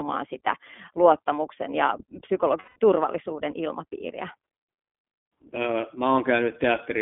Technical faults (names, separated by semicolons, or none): iLBC codec; lost iLBC frames